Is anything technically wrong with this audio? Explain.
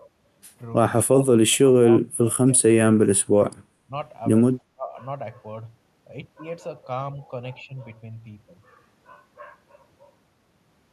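Yes. The speech repeatedly drops out in the first five seconds, in bursts from 1.1 to 1.82 s, 1.99 to 2.38 s, 2.56 to 2.63 s, 3.12 to 3.54 s, 3.87 to 3.91 s and 4.68 to 4.96 s. The level falls by up to about 30 dB, and the short dip at 3.87 s is shallower at about 10 dB. This is likely speech suppressed in double talk: an echo canceller mistook the talker for loudspeaker echo and turned everything down. On a waveform the envelope shows notches. On a spectrogram the energy fades to dark patches across those spans.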